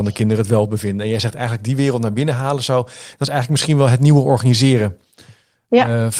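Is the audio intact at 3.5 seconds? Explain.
Yes, at 3.5 seconds the speech runs through cleanly with no dropout, click, distortion or other fault.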